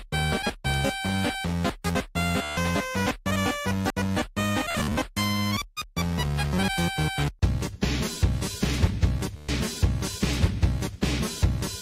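At 1.95 s the sound jumps ahead, with no gap of silence. About a tenth of a second is missing. The likely cause is a dropped buffer (overrun), where the program failed to collect samples before the hardware overwrote them.

From 2.42 to 2.57 s a Bluetooth stutter sets in. The receiver lost about 147 ms of data and kept replaying its last short slice. The repeats form a rapid machine-gun buzz. The sound then resumes further along, as if it had kept playing.

At 3.90 s the same skip returns, again losing about a tenth of a second.

From 4.71 to 4.97 s the stutter is scattered. About 147 ms is lost over roughly 267 ms. The longest unbroken run of repeats lasts about 53 ms, so it sounds choppier than a single buzz.

From 9.37 to 9.49 s a final stutter replaces about 120 ms with repeats. That points to several consecutive lost packets.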